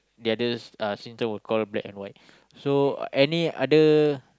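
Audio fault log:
No technical faults can be heard in this speech clip.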